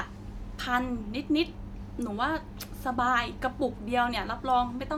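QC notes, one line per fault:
No technical fault is audible anywhere in the signal.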